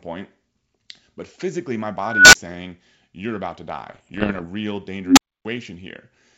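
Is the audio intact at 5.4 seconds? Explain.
No. At 5.4 s the sound has dropped out. This is an unstable filter fault, running from 5.01 to 5.45 s. A recursive filter got bad coefficients, so its feedback made the output grow instead of settle. A low tone around 300 Hz swells for about 161 ms into a loud, clipped beep. Then the values overflow and the output goes silent for about 280 ms until the filter resets. The 5.4 s mark falls inside that silence.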